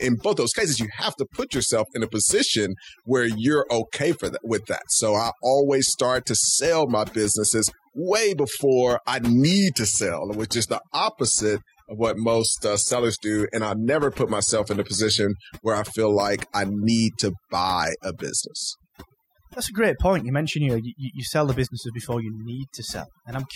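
Overdone noise removal runs through the whole of this speech recording. A noise reducer set far too aggressively has pulled individual frequency bands down or out whenever they sat close to its noise estimate, and the softer parts of the voice were caught along with the noise. The gaps between phrases fall to near silence dotted with twinkling specks.

Adaptive stream at a lower bitrate affects the stretch from 9.24 s to 15.24 s. Without any gap, the quality drops abruptly as playback switches to a lower-quality version of the stream, the kind of switch a slowed connection forces. Nothing remains above 14.9 kHz, and codec artefacts rise. The sound points to a move from AAC-LC at around 96 kbit/s to HE-AAC at around 24 kbit/s, where the top band is rebuilt rather than carried. Full quality returns at 15.24 s just as abruptly.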